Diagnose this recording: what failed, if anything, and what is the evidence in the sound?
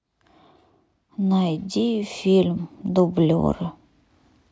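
Nothing failed here as far as I can tell; the speech just runs along with nothing in the sound pointing to trouble at any stage of the chain.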